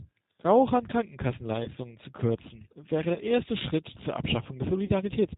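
Throughout, the speech sounds band-limited, slightly rough and synthetic, with no content above 4 kHz. This is plainly audible damage from the G.729 codec (the G.729A variant) at 8 kbit/s. It discards the original waveform and rebuilds each 10 ms frame from a vocal tract filter, a pitch predictor and a handful of pulses, so fine detail is lost and the result carries an artificial edge.

At 1.64 to 1.68 s, just before "zu kürzen wäre", the sound briefly smears into a fading buzz or coloured noise. The same happens at 3.14 to 3.22 s, just after "zu kürzen wäre", and again at 4.85 to 4.90 s. This is VoIP packet loss concealed by the speech codec. The first two gaps cover 20 ms each, which fits one lost packet. The last covers 40 ms, which points to two. The decoder filled each gap by extending its last pitch and filter settings at falling gain. Because every frame builds on the previous one, the speech stays weak or distorted for a short stretch after each gap ends.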